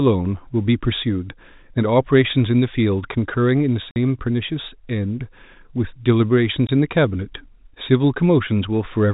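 At 3.91 s the speech cuts out for 50 ms, with hard edges, and at 6.67 s a shorter 20 ms hole does the same. This is packet loss filled with silence: missing packets were replaced with nothing, and both gap lengths fit 10 ms packets.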